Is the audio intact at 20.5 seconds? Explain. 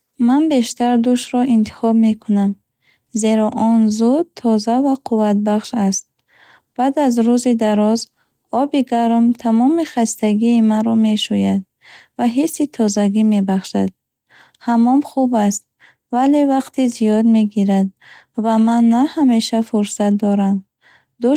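Yes, the speech at 20.5 seconds is intact, with no fault at that moment.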